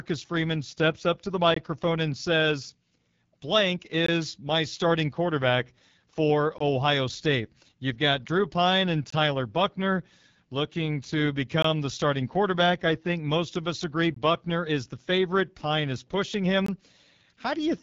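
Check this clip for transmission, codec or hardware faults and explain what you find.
Two faults are present: AMR wideband (HD Voice) coding across the whole clip, and seven short gaps between chunks.

The AMR wideband (HD Voice) codec colours the entire clip. Speech sounds rough and raspy. The level of damage fits one of the lowest rate modes, around 8.85 kbit/s. At that rate the pulse-excited vocal tract model has too few bits to capture fine spectral detail, so the residual gets coarse. Nothing is present above 7.5 kHz, and the top band above 6.4 kHz is filled with synthesised noise rather than real signal.

The gap between chunks fault appears as seven hard-edged dropouts of 20 ms each, at 1.54–1.56, 4.06–4.08, 6.58–6.60, 9.10–9.12, 11.62–11.64, 14.14–14.16 and 16.66–16.68 s. The first falls after "steps up to the" and before "and says". Another follows "my starting quarterback for", and one sits between "looking to" and "the starting quarterback I". 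They repeat every 2.52 s, which fits 2.5 s chunks with 20 ms of silence inserted at each join. No material is lost, but the speech is clipped off abruptly at each boundary.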